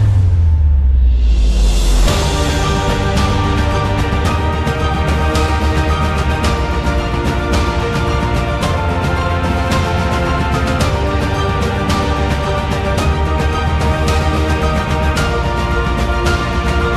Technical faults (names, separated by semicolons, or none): none